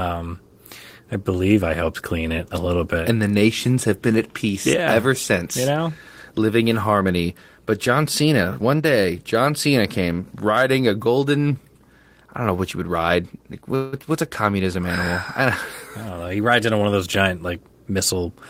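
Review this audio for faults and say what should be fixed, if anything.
At 13.75 to 13.95 s, just before "what's a communism," there's a call audio freeze: the last sound smears into a fading buzz or hiss for about 172 ms, then the speech picks up where it stopped, so nothing's lost but it lands late. The likely cause is delayed packets draining the jitter buffer. A slightly deeper adaptive buffer or better network priority for the call traffic would ride out that kind of stall.

From 16.04 to 17.74 s there's a jitter buffer speed-up. The receiver was sitting on surplus audio and trimmed out tiny pitch-period slices back to back, shaving off around 150 ms. The speech runs about 109% speed at unchanged pitch and sounds a bit rushed. Smoothing packet delivery so bursts don't overfill the buffer, or letting it shed excess more gradually, would prevent it.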